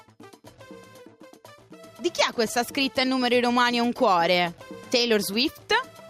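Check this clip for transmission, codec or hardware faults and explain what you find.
One fault is present: gain pumping, running through the whole clip. The gain swings by around 5 dB, ducking under each loud sound, likely because the input gain is set far too high and a fast limiter keeps clamping it down. The waveform looks squashed, with peaks held at a similar height, and a spectrogram shows the noise floor brightening between loud events and darkening beneath them.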